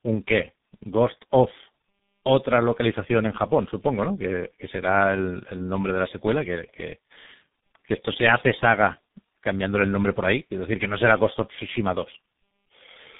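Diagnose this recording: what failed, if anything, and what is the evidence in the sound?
Codec stage: tandem speech coding, two speech coders in series, the second recoding the first's damage, leaves the speech rough, warbly and muffled throughout, with nothing above 3.8 kHz.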